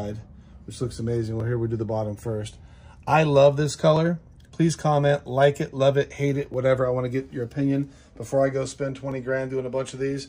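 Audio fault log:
1.40–9.12 s: clock drift buffer slips. About four short clicks, one every 2.57 s, which is likely two devices' clocks differing by roughly 300 ppm, so a few dozen samples are skipped or repeated each time. The strict regular spacing sets it apart from random clicks or network dropouts.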